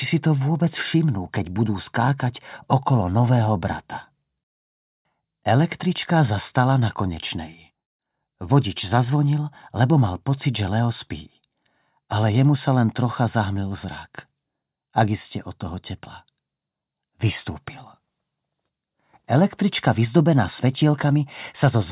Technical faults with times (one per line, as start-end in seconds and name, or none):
none